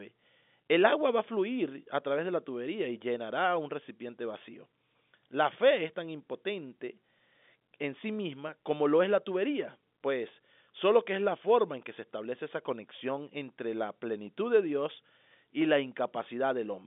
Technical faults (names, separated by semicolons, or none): none